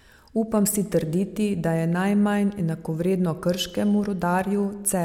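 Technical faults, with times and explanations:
No technical faults are audible anywhere in this speech recording.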